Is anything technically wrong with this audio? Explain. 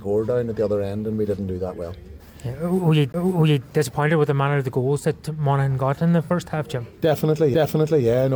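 Yes. There are two kinds of fault.

CD skip at 3.12 s and again at 7.54 s: a knock or disc flaw makes the laser jump to another turn of the spiral. The player mutes briefly, for about 15 ms the first time and only a couple of milliseconds the second, then resumes elsewhere. Each is heard as a tick followed by a jump in the sound. On a waveform it is a short flat gap with a discontinuity on either side. On a spectrogram it is a thin vertical line.

AAC frame loss with concealment from 6.23 to 6.30 s: about 43 ms goes missing, which fits the loss of a single AAC frame. The decoder fills the gap from the last good spectrum, with scrambled signs or interpolated energy. The result is a short smeared, noisy patch. On a spectrogram it shows as a blurred block that has lost its fine detail.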